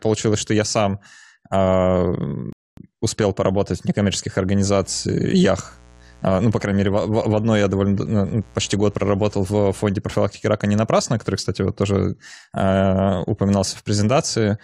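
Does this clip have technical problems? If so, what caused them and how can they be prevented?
Yes, two. At 2.53 s there's a rebuffering stall: the player ran dry on downloaded audio, went silent until 2.77 s, then picked up exactly where it left off. Nothing's missing, just about a quarter-second of dead air. A bigger playback buffer prevents it.

From 4.66 s to 9.85 s there's a mains buzz: a raspy 60 Hz buzz with harmonics well up into the kilohertz range, sitting roughly 25 dB under the speech. Spiky switching from a dimmer, rectifier or unshielded cable leaked in. Shielded cabling, keeping dimmers off the circuit, and fixing ground loops prevents it.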